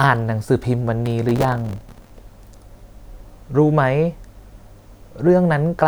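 From 1.06 to 2.18 s, processor overload crackle tears through the speech. Tiny buffers of about 3 ms keep missing their deadlines. Stale audio repeats in gritty bursts.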